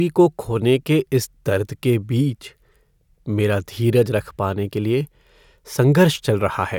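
No technical faults are audible.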